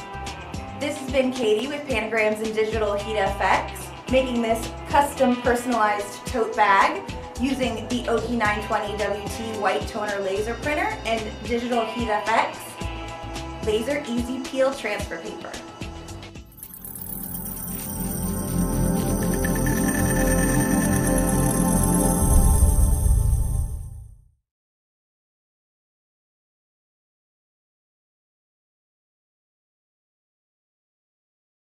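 A voltage spike, likely from a switch, plug or static discharge, enters the signal path twice, giving loud pops: a double pop from 1.43 to 1.62 s peaking around 10 dB above the audio, then a single, softer pop from 14.73 to 14.76 s, with the sound continuing underneath.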